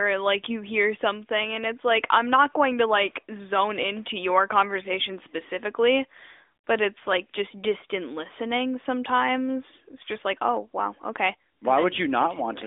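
No faults found in the speech; the AMR narrowband mobile codec path at 12.2 kbps, band-limited to 300 Hz–3.6 kHz, is working as a normal mobile line.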